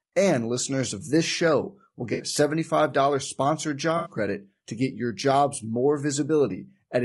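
Right from the start the speech has a rough, grainy quality, with a hiss sitting between the harmonics and a top end that sounds thin and synthetic. That's the signature of low-delay AAC compression, likely AAC-ELD at something around 32 kbps. The short frames it uses to keep latency down can't resolve the pitch harmonics cleanly, so at this rate the damage is plainly audible the whole way through.

At 2.13 s, just after "of this show will", there's a smeared, noisy patch lasting about 0.1 s, through to 2.23 s. That's AAC frame loss with concealment: a few frames went missing and the decoder papered over them from the last good spectrum. It happens again from 3.97 to 4.12 s, right before "credit to get your". That one is slightly longer.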